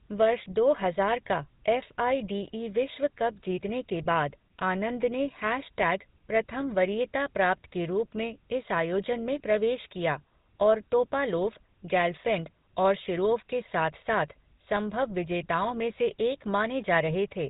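From start to end, the speech carries GSM full-rate codec damage. Nothing above 4 kHz survives. The pulse-driven excitation gives a buzzy, gravelly roughness, which fits 13 kbps.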